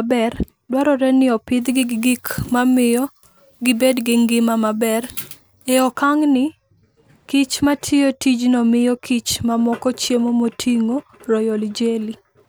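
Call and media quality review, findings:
Pre-emphasis left on, 1.62–5.92 s after "dwarore ni": thin, sibilant speech; missing de-emphasis, consistent with a 75 µs FM curve. Spectrogram shows treble about 14 dB hot at 10 kHz.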